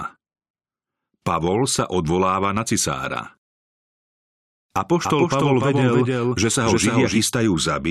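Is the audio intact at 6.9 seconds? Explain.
No. At 6.9 seconds you're inside a doubled audio track that runs from about 5.04 to 7.18 s. A second full-band copy of the speech trails the original by roughly 300 ms, sitting about 5 dB lower, so everything gets a clean, flat slapback with no room tail at all. The likely cause is the same signal being captured again through a slower path. The copy appears and drops out abruptly at the span edges.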